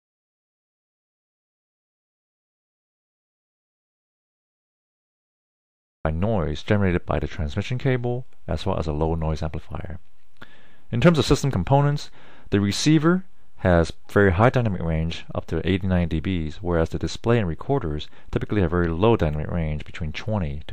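The clip opens in dead silence, an audio dropout already under way, until 6.05 s, when sound cuts in abruptly; likely the input link dropped while silence kept recording.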